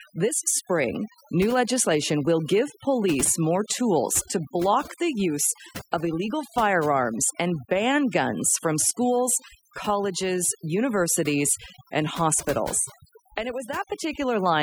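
Overdone noise removal throughout this speech: an over-strong noise reducer pulls down every frequency band near its noise estimate, leaving twinkling specks in near-silence and taking quiet parts of the voice with them.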